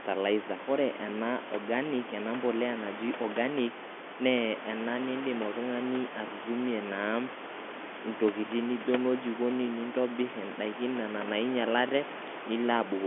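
Speech, with nothing technically wrong to report.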